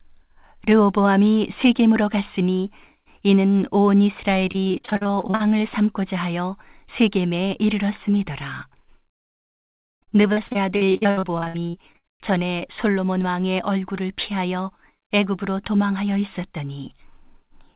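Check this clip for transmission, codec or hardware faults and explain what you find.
Yes, there are transmission faults. Two stretches of the speech break up while the rest travels over a narrowband call path that fits G.711 mu-law, with nothing heard above 4 kHz.

Repeated packet loss (robotic sound) occurs at 4.52–5.50 s and again at 9.12–12.08 s. Audio arrived missing or late over and over, and each hole was patched by stretching the preceding sound. About half of the first span and about 37% of the second are concealment. The gaps run up to 41 ms in the first span and up to 100 ms in the second, giving choppy, robotic speech with pieces missing.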